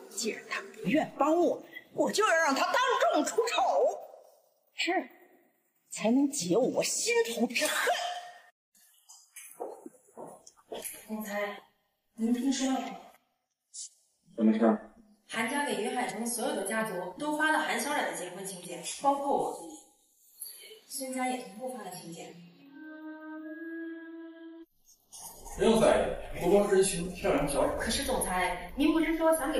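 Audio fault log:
Nothing stood out on listening to this clip.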